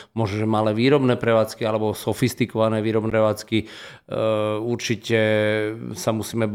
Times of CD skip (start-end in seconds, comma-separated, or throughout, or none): 3.10